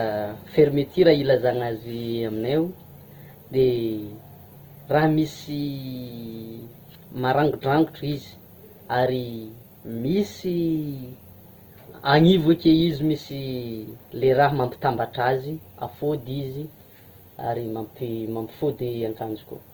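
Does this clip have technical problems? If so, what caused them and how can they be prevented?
Yes. Opus compression damage runs through the whole speech clip, from start to finish. The grain and roughness point to the codec's music-oriented CELT mode, most likely at a low rate in the region of 16 kbps. Bands short of bits are filled with folded copies of lower bands or with noise, so tonal detail turns gritty rather than swirling, though the band stays wide, reaching about 20.2 kHz. Encoding at a higher bitrate would prevent this.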